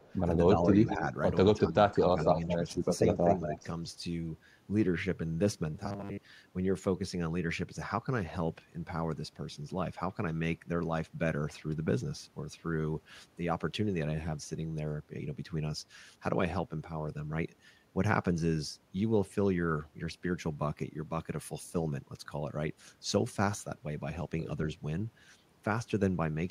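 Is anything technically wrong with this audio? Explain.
Yes, there are three kinds of fault, all in the first six and a half seconds.

Echo leak appears at 0.0–0.11, 0.73–0.95, 2.06–2.72 and 3.52–3.58 s: a delayed copy of the speech trailing by about 215 ms, faint at first, then about 10 to 15 dB below the speech. The likely cause is a far-end loudspeaker whose echo canceller let residue through. On a spectrogram it shows as a fainter, shifted duplicate of the speech harmonics.

Speech suppressed in double talk runs from 1.54 to 3.61 s, overlapping the longest echo stretch. The speech dips by up to about 10 dB, in pieces totalling roughly a second, likely because the echo canceller turned both its own talker and the loudspeaker echo down. The waveform envelope shows notched gaps, with thinned upper bands on the spectrogram.

Robotic sound from repeated short buffers runs from 5.75 to 6.22 s: a rigid, metallic 100 Hz buzz that loosely tracks the speech. 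The buzz fits a 10 ms chunk being replayed, likely because audio arrived too seldom, with most of the stretch repeated. The spectrogram shows evenly spaced 100 Hz harmonic lines, and the waveform shows identical repeating cycles.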